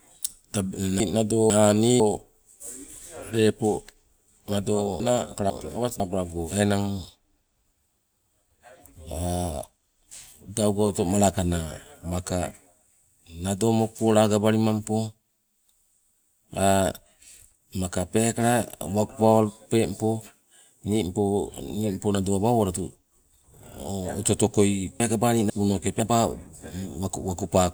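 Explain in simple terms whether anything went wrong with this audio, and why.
At 1.0–2.0, 5.0–6.0 and 25.0–26.0 seconds the speech briefly jumbles: chunks out of order, where a half-second piece played one slot late.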